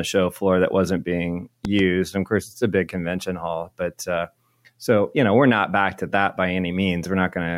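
At 1.65 to 1.81 s, just after "floor that wasn't being", a loud pop occurs twice, roughly 10 dB above the speech, likely from an electrical voltage transient.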